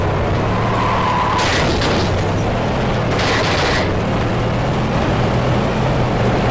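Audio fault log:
4.93 to 6.50 s: doubled audio track. A second full-band copy of the sound enters abruptly and runs to the end, trailing by roughly 0.7 s at about the same level, with no decay or room colour, likely from two copies held out of step.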